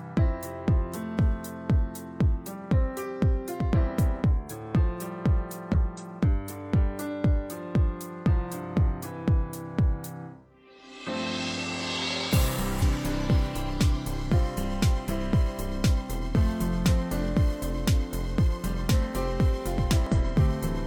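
A compressed stream carrying damaged data first shows up at 5.72 s. Corrupted bytes leave the decoder unable to parse a frame, so it loses sync and hunts for the next valid header. For about 50 ms, to 5.76 s, a short glitch replaces the sound. The same fault returns from 12.77 to 12.82 s and as a single blip at 20.07 s.

Integer overflow strikes at 12.34, 16.86, 17.88, 18.89 and 19.91 s. At each point a sample sum reaches the top of the integer range. Instead of being clamped, it wraps to the opposite extreme, so the waveform jumps across the full range in one step. Even peaks that only just touch full scale flip over, and each produces a violent, instantaneous crack far harsher than ordinary clipping. The last four fall roughly a second apart.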